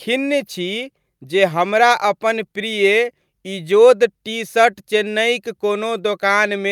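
No technical faults are audible.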